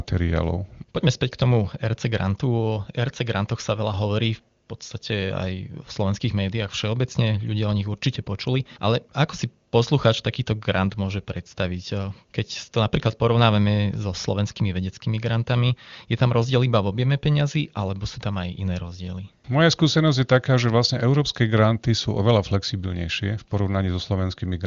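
No faults found; the speech is band-limited to about 7.2 kHz in the manner of the AMR wideband (HD Voice) codec, with a sound that fits its highest rate of roughly 24 kbit/s and coding roughness that is faint at most.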